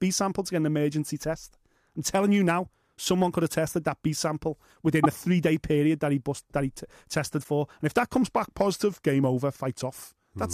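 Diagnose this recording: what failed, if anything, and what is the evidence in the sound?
At the codec stage, two short disruptions point to a likely broken MP3 bit reservoir. At 5.03 to 5.06 s, just before "the three day period", and again at 7.43 to 7.46 s, the audio jumps ahead with a disruption lasting roughly one 24 ms frame. When frames are lost, the next frame looks back into the reservoir for borrowed bits, decodes bytes from the wrong frame and produces this disruption.

In the buffer stage, a drift correction step is the likely cause of a sustained shift starting at 8.22 s, right after "if that", and running to 10.52 s. Playback slows by 5.36 percent and pitch drops by about 95 cents, nearly a semitone, with speed and pitch moving together. This is what a clock-matching resampler does when it changes rate in a single step to rebalance its buffer.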